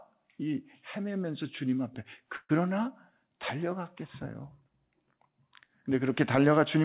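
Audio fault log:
2.36–2.51 s, call audio freeze: the sound stalls into a fading buzz for about 130 ms, then a brief silence, and likely packets were delayed and the jitter buffer ran empty. Unlike a dropout, nothing is lost: the audio resumes where it stopped, about 130 ms later.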